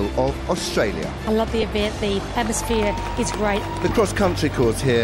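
At 1.62 s a brief noisy smear replaces about 10 ms of sound: lost LE Audio frames, likely a single frame, concealed by reusing the previous spectrum with randomised signs.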